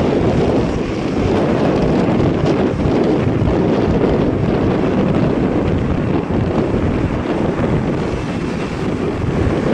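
At 4.33 s, compressed frames are skipped. About a fifth of a second of sound never plays. The decoder jumps straight ahead, which fits roughly ten missing 20 ms frames.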